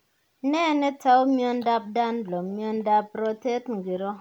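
No technical faults are audible anywhere in this speech recording.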